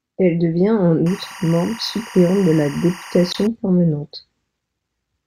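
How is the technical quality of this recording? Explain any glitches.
The recording has two audible technical faults, and they overlap briefly near the 3.3 s mark.

From 1.06 s to 3.47 s there is timecode bleed. Linear timecode running at 23.976 frames per second is leaking in from an adjacent track or cable. Its square-wave signal flips between two pitches, roughly 1 kHz and 2 kHz. The result is a continuous chirping warble about 20 dB below the speech, sitting behind it for those 2.4 seconds.

From 3.31 s to 3.35 s a corrupt frame was decoded. Bit errors in the compressed stream were passed to the decoder, which played the damaged data instead of concealing it, and the length of the burst suggests a few consecutive bad frames. Misread gains and codes put energy at the wrong frequencies, producing a brief glitch that peaks around -10 dBFS, just before the timecode warble stops.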